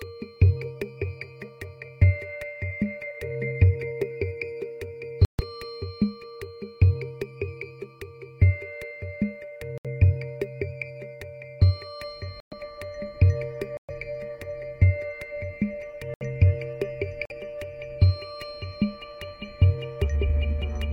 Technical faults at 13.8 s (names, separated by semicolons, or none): corrupt frame muted